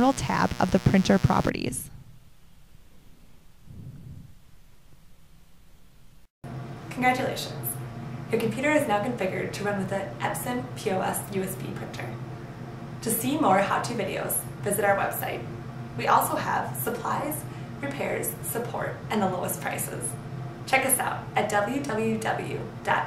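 From 0.0 to 1.5 s a mains buzz sits under the sound, roughly 15 dB down. Switching spikes from the 60 Hz supply leak in, giving a raspy tone. A spectrogram shows evenly spaced harmonic lines climbing into several kHz, then stopping abruptly.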